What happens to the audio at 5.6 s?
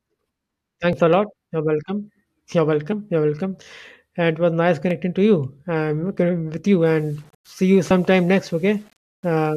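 Nothing goes wrong at 5.6 s; the speech continues intact through that moment with no dropout, click or distortion.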